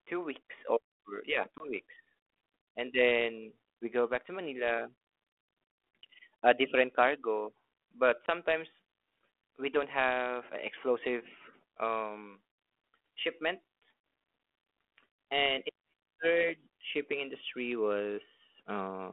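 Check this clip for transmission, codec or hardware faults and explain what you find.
Three short dropouts occur, all from packet loss on an ADPCM call carried as 32 kbit/s G.726 in a 300 to 3400 Hz telephone band.

The first hole comes at 1.58 s, right after "two weeks or yeah", and the second at 8.26 s, after "a different cargo but". Each loses 20 ms, which fits about one packet. The third, at 14.0 s, loses 40 ms, about two packets. Each gap is filled with silence and has hard edges. The decoder's adaptive predictor and step size then drift from the sender's. So the sound returns slightly distorted before settling.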